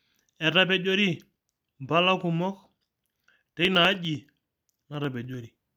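Periodic USB or driver dropouts run from 2.66 s to 5.64 s in this speech. Every 0.1 s, something blocks the audio path and about half a millisecond is skipped outright, giving around thirty evenly spaced ticks that sound only while speech is present.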